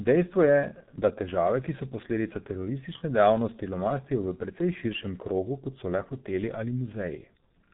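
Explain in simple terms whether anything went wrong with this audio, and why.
Throughout, heavy G.723.1 codec damage: nothing above 3.8 kHz remains. Unlike a simple muffled phone line, the speech also sounds hoarse, with blurred consonants.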